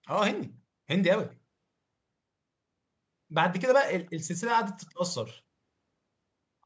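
No technical faults can be heard anywhere in the speech. The call microphone processing is working as intended, with the lowest bass taken out by its high-pass filter and nothing present above 8 kHz.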